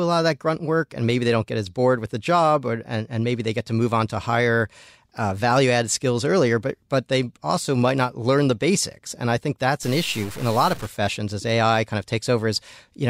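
A speech recording. From 9.83 to 10.87 s, right after "and I think that's", harsh, buzzy distortion cuts in. This is likely a stuck bit, with samples jumping by a fixed step of about -35 dBFS.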